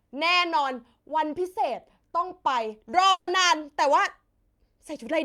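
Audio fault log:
3.11 to 3.30 s, long network dropout: the speech smears into a buzzy, fading continuation of the last sound for about 160 ms, then picks up further on with that stretch missing. Likely the audio stopped arriving, and the receiver filled the gap by extending what it last had.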